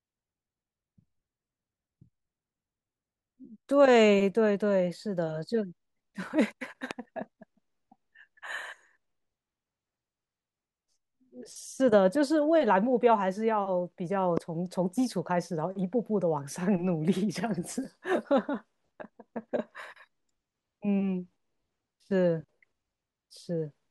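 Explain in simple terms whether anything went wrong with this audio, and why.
Two loud pops cut in, at 6.91 to 6.93 s and 14.37 to 14.40 s. Each is one sharp click, much louder than the speech, which carries on underneath. The likely cause is a sudden electrical jolt, like static or a loose plug.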